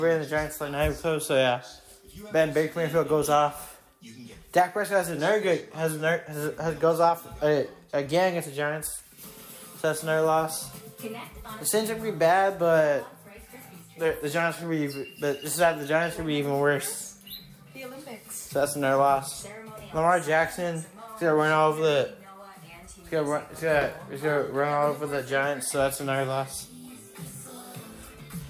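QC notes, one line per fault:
No faults found. Nothing in the audio needs a QC entry.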